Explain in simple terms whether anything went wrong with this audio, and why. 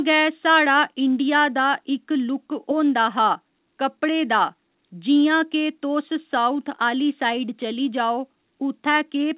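Nothing went wrong with this recording. The speech came through an ordinary call connection, which leaves it with the narrow, slightly muffled sound of a phone line because everything above about 4 kHz is missing.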